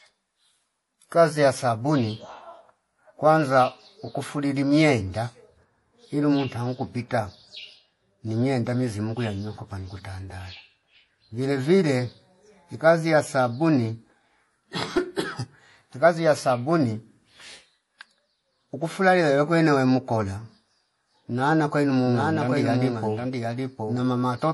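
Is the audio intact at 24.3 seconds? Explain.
No. At 24.3 s the sound has a watery, swirling quality with smeared attacks and no content above 11.5 kHz. This is MP3 compression, likely at a low bitrate around 48 kbps, where the encoder cuts the treble and drops weaker frequency components that flicker between frames.

A doubled audio track is also present from 22.05 s, just after "nana kwailo", through the end. A second full-band copy trails roughly 0.7 s behind, about 5 dB quieter, with no decay or room colour. Two out-of-step copies of the same audio were likely mixed together.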